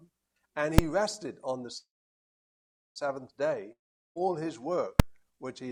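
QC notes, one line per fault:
0.78 and 5.00 s, invalid numbers at full scale: each of these is a single sharp bang. A calculation blew up into infinite or invalid values, and those got pinned to the largest value the format allows, so the output sits flat at one extreme value, far beyond the audio's peaks, for about 2.7 ms, which fits a 128-sample processing block. That's too short to hear the separate pops at the start and end, so it all merges into one hard click.
1.77 to 2.98 s, call audio freeze: the sound stalls and the last bit is stretched out into a fading buzz, then there's roughly 1.1 s of near silence before things pick up exactly where they left off. The likely cause is packets held up in transit, so the jitter buffer ran dry and the receiver filled about 1.18 s with concealment. Nothing is lost, and everything after this point just arrives about 1.18 s later.
3.72 to 4.25 s, long network dropout: same kind of fading buzz tail at first, then about 0.4 s of silence, but this time the audio comes back further along rather than where it stopped. 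About 0.44 s of material is simply gone, covered over by roughly 0.43 s of fill. This is likely a stretch where no packets arrived at all and the missing audio was never played.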